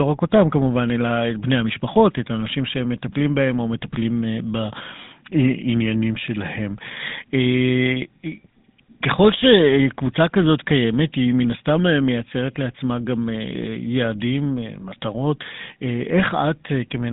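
GSM full-rate codec damage runs from start to finish, and it is plainly audible. The codec rebuilds the speech from a vocal-tract filter excited by a sparse, regularly spaced pulse train, so the fine detail of the excitation is lost and the voice takes on a buzzy, gravelly grain. The sound fits the 13 kbps full-rate coder. The band is telephone-narrow, about 150 Hz to 3.7 kHz, with nothing above 3.8 kHz.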